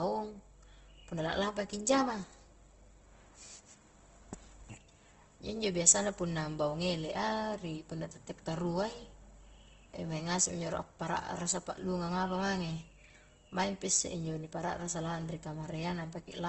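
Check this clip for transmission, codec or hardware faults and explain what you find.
One fault runs through the whole clip.

Opus compression, throughout: the speech is likely coded by Opus in its CELT music mode at a low rate, which fits about 16 kbps. Band energies survive but their detail is refilled, so the voice sounds grainy and rough, with nothing above 8.1 kHz.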